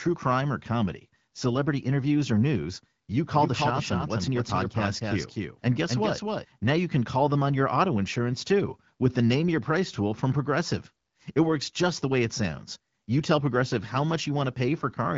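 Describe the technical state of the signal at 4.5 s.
At 4.5 s the speech is heard twice: a dry, full-band copy about 5 dB quieter trails roughly 300 ms behind. This doubled audio track starts abruptly after "interviews or news you" at 3.35 s and stops abruptly at 6.45 s. It is likely from a second capture through a slower path or an edit holding two copies out of step.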